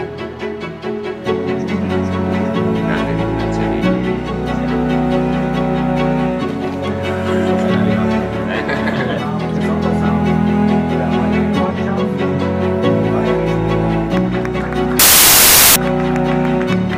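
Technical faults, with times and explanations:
15.0 to 15.76 s: samples built from the wrong bytes. For about three quarters of a second the reader misassembles each sample's bytes. The rapidly changing low bits land in the high positions. The result is a burst of loud, harsh broadband noise.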